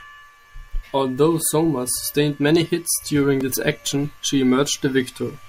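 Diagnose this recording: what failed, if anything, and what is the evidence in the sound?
A block of digital silence hits the driver or buffer stage. At 3.41 s, between "sustained many hits during" and "this action she", the speech drops to silence for about 2.7 ms and returns with no fade. The abrupt edges give a tick or dip rather than an audible hole. A gap this short fits one 128-sample buffer the program failed to fill in time. The output went out as zeros.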